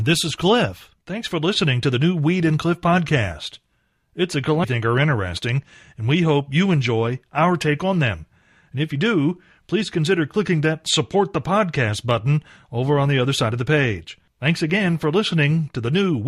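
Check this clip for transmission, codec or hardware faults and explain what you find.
One transmission fault is present. At 4.63 s the speech jumps abruptly forward with a brief blip, the sign of a stream segment skipped: a segment of the stream likely failed to load, so the player discarded it and continued from the next one.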